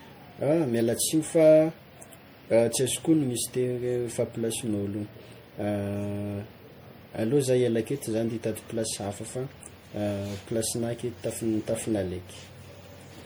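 Generation loss runs throughout the speech, likely from about three successive MP3 passes at 64 kbit/s, leaving swirly, hollow smearing and blurred attacks beyond that bitrate alone.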